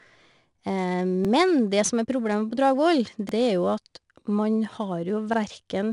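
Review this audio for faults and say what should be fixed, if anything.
The whole thing has 4-bit ADPCM compression: each sample is coded as a coarse step from a prediction, so there's a gritty hiss riding on every loud passage, and nothing above 10.6 kHz. Keep a PCM or higher-quality master and encode from that instead.

There are overlapping chunks at 1.25 s (just before "det som"), 3.29 s and 5.34 s. Each new 2 s chunk starts about 44 ms early, so that slice plays twice and stutters. Fix the chunk offsets so each one starts exactly where the last ended.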